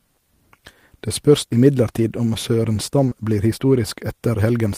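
At 3.05 to 3.09 s and again at 3.09 to 3.13 s, there is short concealed packet loss. Two back-to-back gaps each drop about 20 ms of speech that never reached the decoder in time. The receiver patches each hole with about 20 ms of synthesized sound, extending the preceding pitch or noise, then blends back into the real signal. Together they give a brief smear or wobble lasting under a tenth of a second.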